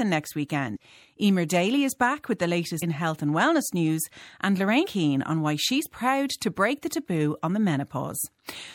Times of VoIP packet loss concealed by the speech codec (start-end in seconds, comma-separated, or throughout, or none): none